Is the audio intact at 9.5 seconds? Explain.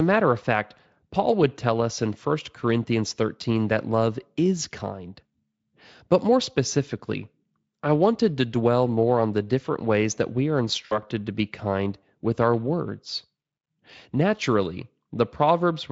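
Yes, the speech at 9.5 seconds is intact, with no dropout, glitch or other fault at that moment.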